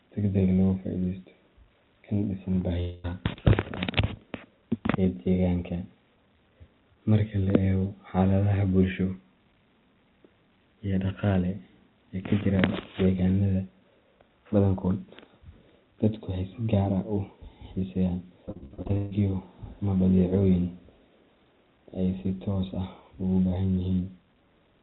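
A speech recording carried over a narrowband call link, with nothing above 4 kHz, which points to G.711 A-law at 64 kbps. From 2.8 to 3.06 s, about a quarter second of sound is replaced by a smeared continuation of the preceding sound that never falls to silence, most likely a long network dropout in which roughly 240 ms of audio never arrived and the receiver filled the hole. What separates it from the later fault is that it is one unbroken gap, after which the sound resumes further along with the missing stretch simply gone. From 18.46 to 19.13 s the character is different: repeated packet loss breaks the speech into eight separate gaps, the longest about 134 ms, and concealment patches each one before the next arrives. With nearly 60 percent of that span synthesised, the result is choppy and robotic rather than a single smear.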